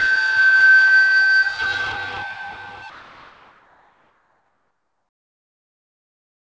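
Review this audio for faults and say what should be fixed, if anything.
Comfort noise in place of the background, from 2.90 s to the end at 6.46 s: the detailed background, about 52 dB below the loudest sound, becomes a steady, featureless hiss about 2 dB quieter, likely because discontinuous transmission stopped sending and the receiver filled the gap with synthetic noise. Turning off discontinuous transmission on the sending side would keep the real background throughout.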